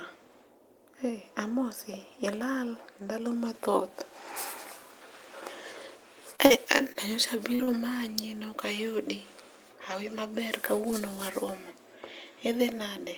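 A speech recording with three network faults close together. From 6.35 to 6.98 s there is repeated packet loss (robotic sound): four short holes, the longest about 39 ms, are each patched by stretching the preceding sound, so roughly a sixth of that stretch is synthetic and the speech turns choppy. Unlike a plain dropout, the holes never fall to silence, and unlike steady codec artefacts the roughness comes and goes with each gap. Shortly after, two separate short concealed packet losses follow at 7.55 to 7.62 s and 7.63 to 7.70 s, each filling about 40 ms. Here the receiver continues the last sound from its pitch or as shaped noise and then blends back, which gives a brief smear or wobble and may swallow a consonant. These are isolated single holes rather than a run, so they lack the sustained robotic texture of the earlier stretch.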